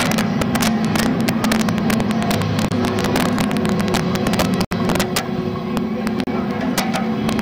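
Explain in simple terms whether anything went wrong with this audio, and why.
Two problems can be heard. The first is integer overflow, present through the whole clip. The loudest peaks are pushed past the largest value the digital format can hold, and instead of being capped they wrap around to the opposite extreme. Only a small fraction of the audio, well under one percent, goes that far, but each of those moments produces a harsh, sudden crack on loud passages, sharper and nastier than ordinary clipping distortion.

The second problem is three brief dropouts where the sound cuts to silence and then carries on: from 2.69 to 2.71 s (about 25 ms), from 4.65 to 4.71 s (about 68 ms), and from 6.24 to 6.27 s (about 33 ms). The likely cause is a Bluetooth stall. Interference delayed the wireless packets, the headphones used up their small reserve of audio, and playback paused until the missing data arrived.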